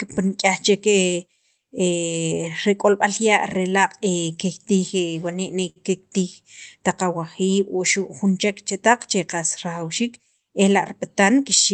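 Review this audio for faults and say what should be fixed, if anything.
A short stall from a late packet occurs at 5.69 to 5.78 s. A packet arrived after its playout time and the jitter buffer ran empty, so the receiver stretched the last sound for 64 ms and then resumed from the same point. Nothing is lost. The result is one sound held unnaturally long, and the end-to-end delay grows by 64 ms. To prevent this, give the jitter buffer enough target depth to cover the network's actual arrival-time variation.

A jitter buffer speed-up runs from 11.08 to 11.72 s, at the end of the clip. The buffer held more audio than its target, so the receiver cut out short pitch-period-length segments many times in a row, about 50 ms in total. Over that stretch the speech plays at about 106% speed with unchanged pitch and sounds slightly hurried. The high-frequency content stops around 8 kHz throughout, which comes from the call codec's bandwidth setting. 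To prevent this, smooth the network path so delayed packets don't arrive in bursts, and let the buffer shrink gradually during pauses.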